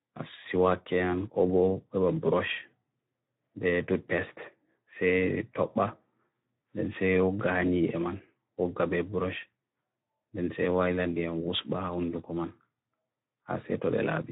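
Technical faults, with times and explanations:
Throughout: Speex codec. The speech has plainly audible coding damage, sounding grainy, noisy and hoarse. Speex is a CELP codec that models speech cheaply. At this quality, which fits a bitrate around 11 kbps, the excitation gets too few bits, so the voice's fine structure degrades.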